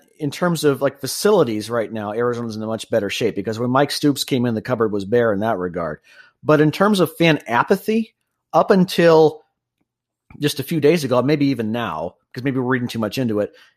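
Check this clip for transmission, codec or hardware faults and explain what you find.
One fault turns up in the speech. Dropped samples at 5.85 s, just after "was bare in that": a couple of samples, far under a millisecond, were likely lost from the stream. The waveform jumps straight to a later value, and that step is heard as one sharp click.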